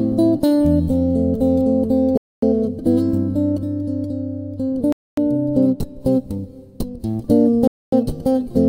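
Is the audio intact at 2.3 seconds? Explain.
No. At 2.3 seconds the audio sits inside a gap between chunks. The stream arrives in pieces of about 2.5 s, and silence is left at the join before the next piece. That leaves a 250 ms hole of silence from 2.17 to 2.42 s.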